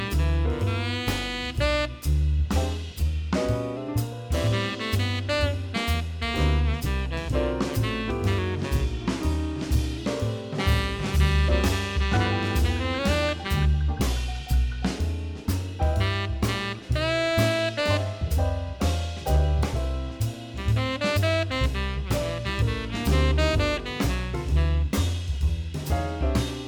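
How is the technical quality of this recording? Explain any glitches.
The recording has three drift correction step glitches, at 2.99 to 3.77 s, 8.39 to 9.98 s and 14.06 to 15.45 s. Clock-matching software likely slowed playback by 6.07% in one step, dropping pitch 108 cents, about a semitone, before snapping back.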